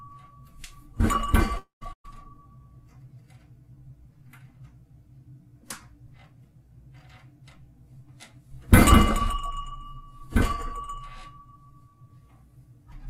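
At 1.57 s the sound gives way to a fading continuation of what came just before, and a stretch of about 130 ms is simply silent, running to 1.84 s. That's likely a long network dropout: about 240 ms of audio never arrived and roughly 236 ms got filled in.

Right after, from 1.93 to 2.07 s, there's a burst of packet loss. The receiver stretched the last sound over a 110 ms gap, fading it out, with about 100 ms of it silent. It then picks up again with about 120 ms of the original gone.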